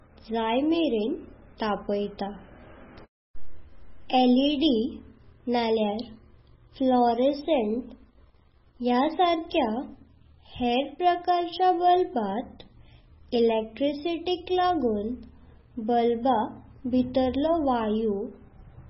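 Speech recording with heavy MP3 compression damage from start to finish. Nothing comes through above 5.5 kHz, so it sounds dull and watery. That level of damage fits a very low bitrate around 16 kbps, likely from starving the encoder of bits.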